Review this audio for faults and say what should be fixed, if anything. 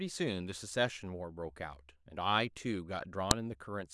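At 3.31 s, a file header played as audio: a joined piece's header bytes burst out as a sharp snap, rather than the silent gap of a dropout. Strip the header from each piece before concatenating or streaming the sample data.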